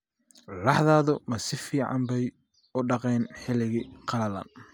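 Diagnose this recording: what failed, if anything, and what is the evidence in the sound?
Nothing failed in this recording, and the sound gives no evidence of any fault.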